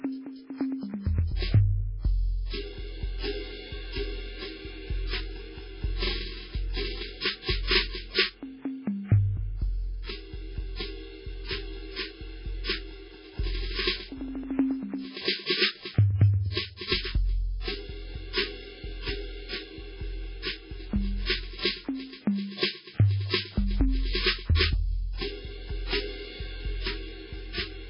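A music clip with heavy codec damage throughout. Nothing is heard above 5.3 kHz, and the sound is watery and swirly, likely from MP3 compression at a very low bitrate, around 16 kbps. Pre-echo occurs from 15.46 to 15.50 s and from 16.88 to 16.92 s. In each case a brief hiss, of about 40 ms and 36 ms respectively, comes before a sharp attack and softens it.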